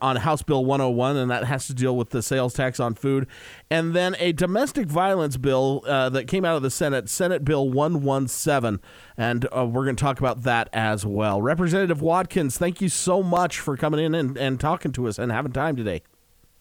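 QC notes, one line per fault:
9.26–16.43 s, periodic USB or driver dropouts: a regular series of short ticks, about seven in all, spaced 1.024 s apart. At each one a brief slice of audio, around a millisecond, drops to silence and the waveform then resumes abruptly. The hard edges at both ends of each gap produce the click. The exact spacing points to a background task stalling the USB bus or audio driver on a fixed timer.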